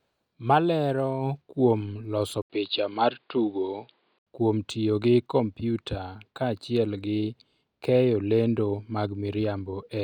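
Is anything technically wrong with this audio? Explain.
Yes. From 2.42 to 4.27 s, the input likely switched to a poorer device. Nothing above 4.9 kHz passes. The sound turns dull, with faint new noise, after an 80 ms gap.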